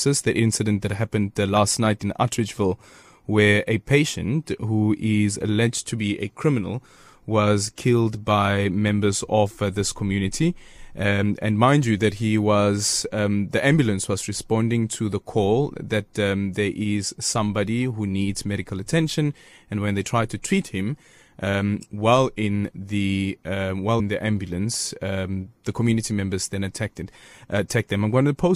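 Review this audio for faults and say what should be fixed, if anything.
Two brief glitches break into the speech, one at 11.22 s just before "and mind you that", the other from 23.97 to 24.01 s, between "while in the uh" and "the ambulance um the". Both are damaged data in a compressed stream: corrupted bytes made the decoder misread frames and lose sync until it found the next valid header. Verify file integrity with checksums and use error-checked transfer so corrupted frames are caught before decoding.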